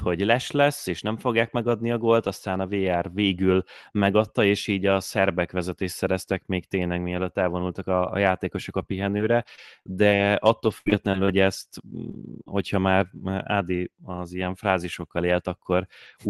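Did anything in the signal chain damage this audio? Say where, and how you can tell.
Yes. The damage happened in the network stage of a call. From 9.17 to 11.29 s, just after "a a játékosok a", the sound turns choppy and robotic. There are ten short gaps, the longest 77 ms, about 300 ms in all. This is repeated packet loss. The decoder patched each hole by extending the previous sound.

Lost packets were rebuilt from error correction at 12.07, 12.13, 12.27, 12.46 and 12.50 s. Each lasts 20 ms and plays without a gap but sounds rougher and noisier. The next packet carried a low-bitrate Opus copy of the missing one, and the decoder used it.

Short concealed packet loss also occurs, from 12.11 to 12.15 s and from 12.43 to 12.48 s. Each is a brief smear or wobble of about 20 to 30 ms. The audio arrived too late, so the receiver continued the last sound and blended back into the real signal.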